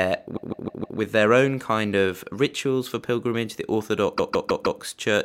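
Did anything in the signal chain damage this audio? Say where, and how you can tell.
Yes, at the codec or storage stage: repeated frames. From 0.35 to 0.98 s, just before "their own kind of", and from 4.17 to 4.80 s, a 156.7 ms block plays four extra times. Each stutter adds 0.63 s, which fits a six-frame run being rewritten.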